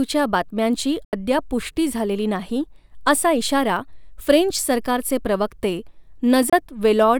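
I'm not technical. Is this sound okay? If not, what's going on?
No. This speech has two Bluetooth dropouts, most likely caused by audio data failing to reach the headphones in time, so the headphones had nothing to play and went silent. The first hole runs from 1.05 to 1.13 s, losing 80 ms, which fits several lost packets. The second, from 6.50 to 6.53 s, loses about 27 ms. Each gap cuts in and out sharply or with a very quick fade, and the speech picks up further along, as though it kept playing underneath.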